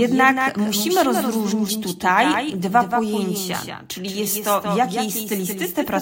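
Speech, with a doubled audio track running the whole way through: a second full-band copy trails roughly a fifth of a second behind, about 5 dB down, with no decay or room colour. It's likely a second capture path or a misaligned edit stacking two copies.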